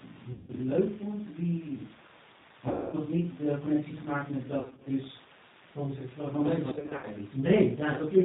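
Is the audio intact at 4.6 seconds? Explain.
No. From 4.60 to 4.88 s, just after "de connectie gemaakt met", there is VoIP packet loss concealed by the speech codec. Lost stretches totalling about 170 ms, none longer than about 40 ms, were spread over roughly 260 ms. The decoder filled each gap by repeating its last pitch and filter at falling gain. The speech is stretched and fades, then stays weak until the decoder recovers. A spectrogram shows smeared, evenly spaced harmonics. The waveform shows dips in the envelope.

The whole clip also carries G.729 codec damage that is clearly audible, which fits an 8 kbit/s stream. The codec rebuilds speech from a vocal tract filter, a pitch predictor and sparse pulses, so it sounds rough and synthetic. On a spectrogram there is no energy above 4 kHz.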